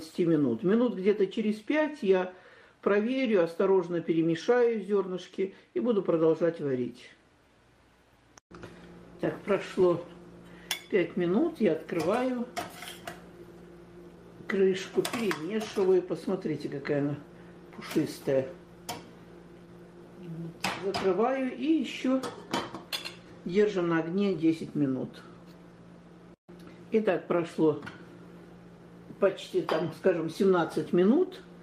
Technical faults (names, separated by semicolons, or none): clock drift between sender and receiver; repeated timing corrections